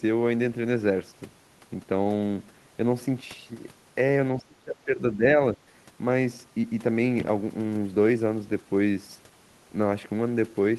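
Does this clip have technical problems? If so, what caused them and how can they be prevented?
Yes. There is a short stall from a late packet at 2.03 to 2.07 s. A packet arrived late and the jitter buffer ran dry. The receiver held the last sound for 20 ms, then resumed without loss. Playback ended up 20 ms behind. A deeper adaptive jitter buffer prevents this.

From 4.38 to 5.24 s the speech dips and breaks up, falling by about 25 dB at worst, for roughly 0.7 s in total. This is likely speech suppressed in double talk, where the echo canceller muted the talker while both sides spoke. Better double-talk detection and echo cancellation prevent it.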